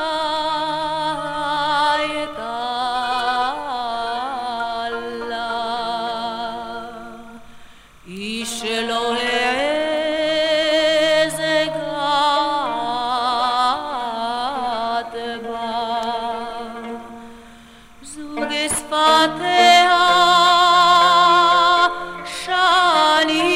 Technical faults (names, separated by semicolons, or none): timecode bleed